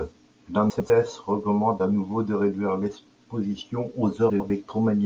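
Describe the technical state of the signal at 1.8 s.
At 1.8 s the speech signal is intact, with no audible dropout, distortion, clipping or other fault.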